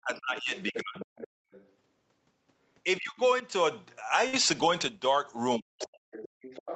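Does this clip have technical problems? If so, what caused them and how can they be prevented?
Yes. The talker's speech dips at 0.0 to 1.09 s, 2.97 to 3.45 s and 5.57 to 6.00 s. The deepest drops are around 40 dB in the first and last stretches and nearer 25 dB in the middle one. This is likely speech suppressed in double talk. When both ends spoke at once, the echo canceller could not tell the local talker from the loudspeaker echo, so it turned everything down. Tuning the canceller for double talk, or using a headset, prevents it.

A second, fainter voice runs under the talker from 0.35 to 1.72 s and again from 5.79 s to the end. It sits roughly 15 dB below the main speech. This is likely the other side's voice leaking through: the far end played on the loudspeaker, and the echo canceller left part of it in the microphone signal. It overlaps the suppressed stretches, which fits both ends talking together. 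Headphones, or a better-converged echo canceller with the speaker volume lowered, prevent it.

Between 4.27 and 4.36 s, the sound holds and fades for 54 ms, then jumps ahead with about 60 ms missing. This is a burst of packet loss. Consecutive packets on the Opus call path, which here carries audio up to 8 kHz, were lost or arrived too late. The receiver extended and faded the last sound, then resumed later in the stream. A more stable network or a deeper jitter buffer prevents it.

At 6.28 to 6.41 s, the room background drops out abruptly, by about 34 dB, and then returns. This is background gated by the echo canceller. While the loudspeaker was playing, the canceller clamped the microphone hard and took the ambient sound with it until it released. Gentler suppression settings, or adding comfort noise, prevent the audible hole.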